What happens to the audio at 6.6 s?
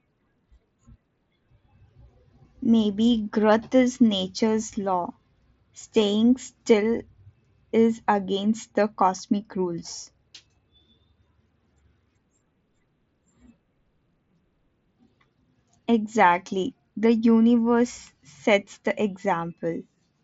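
Nothing goes wrong at 6.6 s: the speech carries on intact there, showing only the steady band limit near 7.7 kHz of the Bluetooth mSBC headset link it travels through.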